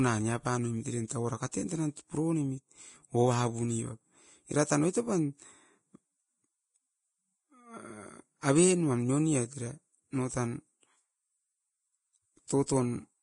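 The whole speech clip has a hissy, grainy sheen. Nothing comes through above 10.6 kHz, and the treble that's left sounds coarse and roughened, as though fine detail has been swapped for noise of similar loudness. That's most likely heavy Vorbis compression at a low setting, which fits a bitrate of around 27 kbps. The low cut-off is the encoder shedding top end to save bits, and the grit is its coarse quantisation of what remains.

On top of that you get pre-echo, a short hiss arriving just ahead of sharp onsets, at 1.07 to 1.10 s, 1.51 s, 12.48 s and 12.66 to 12.68 s. Each smear runs about 17 to 23 ms. The codec spreads its quantisation noise across a whole transform block, so when a hard attack lands late in a block, the noise sized for that attack leaks into the quiet stretch before it. The attacks come out softened and smeared.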